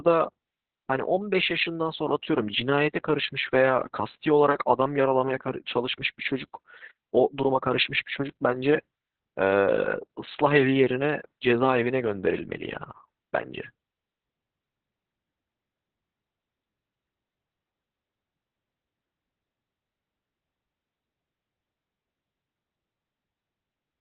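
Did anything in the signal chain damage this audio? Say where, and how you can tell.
Yes, at the codec stage. Throughout the speech, Opus voice compression in SILK mode leaves nothing above 4.3 kHz, and the voice sounds muffled, hoarse and faintly robotic, which fits about 6 kbps. A plain low-pass filter would dull the sound without that coarse, buzzy excitation.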